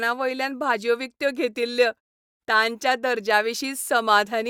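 Speech clip, no technical faults found.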